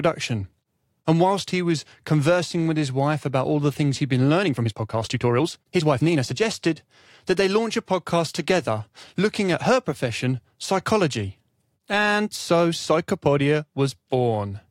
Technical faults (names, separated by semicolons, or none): time-stretched section